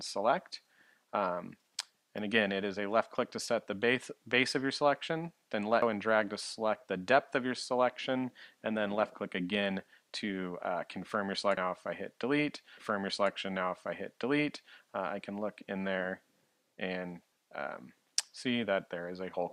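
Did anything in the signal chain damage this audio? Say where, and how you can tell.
Yes. There are audio missing between chunks at 5.82, 11.57 and 17.32 s. Each skip drops roughly a third of a second, and the two sides are butted together. The six-second spacing points to the recorder's buffer stage, likely losing audio while closing one chunk and opening the next.

There is also a stream segment repeated at playback or network level. From 12.77 to 14.77 s, two seconds of material play again, with a small blip at the jump back. The player queued the same segment twice, lengthening the programme by 2 s.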